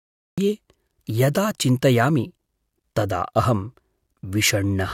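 Right at the top there's a cut-off start: the first 0.38 s is pure digital silence, then the speech just snaps in mid-sound at 0.38 s with no natural attack. The capture or stream clearly began late, so whatever came before that point simply never got recorded.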